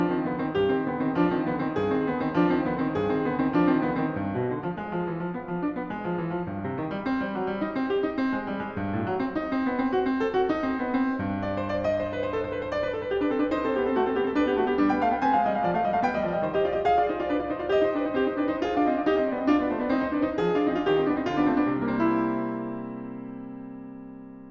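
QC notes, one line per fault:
No faults found in the music.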